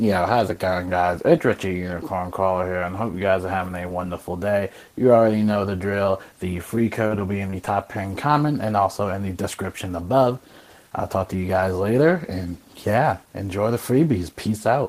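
Repeated packet loss (robotic sound) runs from 6.75 to 7.67 s: a string of short dropouts, the longest about 28 ms, each papered over by stretching the preceding sound. Because the holes arrive in quick succession, the passage turns choppy.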